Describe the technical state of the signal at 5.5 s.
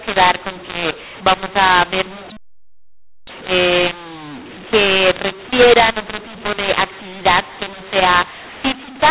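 At 5.5 s the speech is affected by a mu-law and A-law mixup that runs through the whole clip. The signal was coded as A-law but is being decoded as mu-law, so each 8-bit code maps to the wrong level. Loud and soft parts come out at scrambled amplitudes, producing a harsh, gritty distortion, and the quietest samples are lifted well above silence, so any gap fills with noise. The narrow telephone band, capped at 4 kHz, is still audible beneath it.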